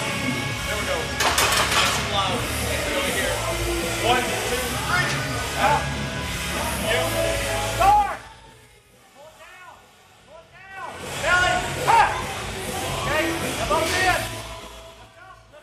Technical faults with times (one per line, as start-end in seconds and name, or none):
7.84-8.88 zipper noise
10.68-11.16 zipper noise